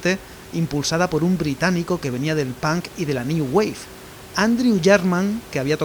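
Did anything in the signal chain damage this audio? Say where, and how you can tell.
No, nothing in the chain has damaged this speech recording, and the only background is the room noise picked up by the microphone, sitting about 20 dB below the speech, which belongs to the recording itself rather than to any stage of the system.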